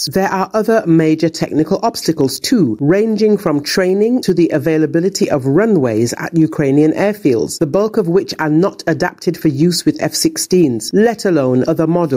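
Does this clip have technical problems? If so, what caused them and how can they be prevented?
Yes. Gain pumping runs through the whole clip: the input gain was likely set far too high, so a fast limiter clamps down on every loud sound and releases in the gaps. The gain swings by around 10 dB, flattening the dynamics. Prevent it by lowering the input gain and using a gentler limiter with a slower release.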